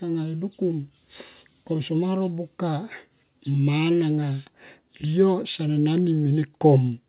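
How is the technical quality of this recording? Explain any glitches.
The recording has no glitches to explain. It carries the sound of a call path working as intended, with nothing above 4 kHz, which points to a narrowband telephone codec such as G.711 mu-law.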